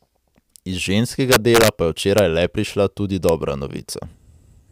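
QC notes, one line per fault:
1.32–1.68 s, 2.18 s, 3.29 s: integer overflow. Loud speech peaks passed the integer maximum and wrapped to the opposite sign instead of being limited. About 5 dB over just before "pa je", this gives repeated violent cracks, sharper than clipping. Peaks barely over the limit give single cracks after "pa je" and after "le prišla tudi".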